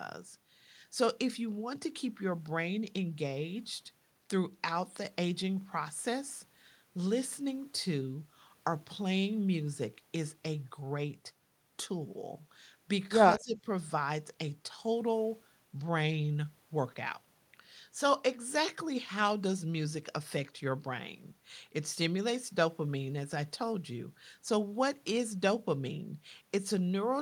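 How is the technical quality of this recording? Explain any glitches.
One glitch stands out, at 13.38 to 13.66 s. For about 0.3 s the speech level dips sharply, by something like 15 dB at its deepest point, then recovers. The likely cause is speech suppressed in double talk: both ends of the call were talking at once, the echo canceller could not tell the local talker apart from loudspeaker echo, and it attenuated everything, pulling this talker down with the echo.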